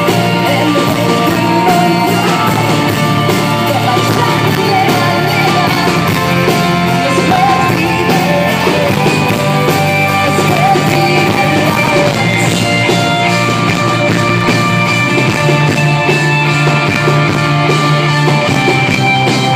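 Between 14.41 and 14.70 s the audio shows processor overload crackle: the processor fell behind and missed roughly ten buffer deadlines in quick succession, with the spacing of the defects pointing to very short buffers of around a millisecond and a half. Each missed buffer drops out to silence with abrupt edges, so the sound is chopped by a rapid run of tiny gaps, heard as a brief gritty crackle that clears once the load eases.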